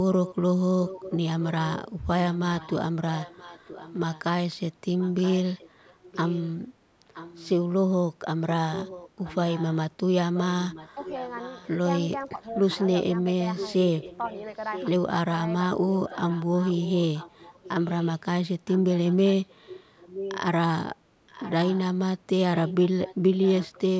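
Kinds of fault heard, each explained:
Echo leak: A fainter copy of the speech trails the original by 975 ms, likely from a loudspeaker on the far end whose echo canceller let some of its microphone pickup back into the call. It covers most of the clip (0.25–7.49 s, 8.71–11.69 s, 12.71–14.89 s, 16.07 s to the end), about 15 dB below the speech and about 10 dB below in the third stretch. On a spectrogram the syllable pattern repeats as a weaker, shifted duplicate. In the waveform, low bursts fill the gaps between phrases.
Speech suppressed in double talk: From 12.36 to 12.61 s the speech dips by up to about 5 dB for roughly a fifth of a second. This is likely an echo canceller that could not tell the local talker from loudspeaker echo while both sides spoke, so it turned both down together. In the waveform the envelope sags briefly. On a spectrogram that slice looks paler across the band.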